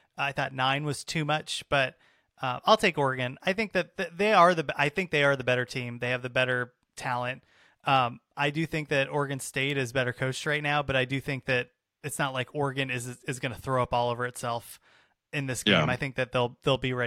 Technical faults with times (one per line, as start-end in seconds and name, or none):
none